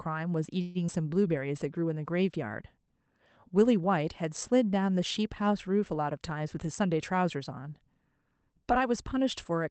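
Packets were likely held up in transit at 0.61 s, and the jitter buffer ran dry. Rather than stop, the receiver kept extending the last stretch of sound for about 0.14 s until 0.78 s. The result is a call audio freeze: a smeared, buzz-like continuation that fades before the sound picks up exactly where it broke off. Nothing is lost, but the rest of the clip is pushed about 136 ms later.

Right after, at 0.87 to 0.91 s, a skip ahead occurs. A short stretch of audio, roughly 70 ms, was thrown away, cutting the built-up delay by around 50 ms. Playback lurches forward with only a 12 ms fill, so the two sides of the cut butt together almost directly. A sliver of sound simply vanishes.

From 0.93 to 1.20 s a jitter buffer slow-down follows, as the receiver rebuilds its reserve. It repeats short pitch-period-sized pieces many times in a row, adding 38 ms in total and playing the passage at about 89% speed. 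Pitch holds steady, but sounds in that span come out drawn-out and slightly sluggish.

Between 6.35 and 7.14 s the opposite happens: a jitter buffer speed-up. The buffer was holding more audio than its target, so the receiver trimmed out many short pitch-period pieces, roughly 150 ms altogether, and the passage runs at about 115% speed. The pitch stays put, but the pacing turns noticeably hurried and clipped. All of this rides on an Opus call path whose top end stops near 8 kHz, which fits a modest bitrate setting.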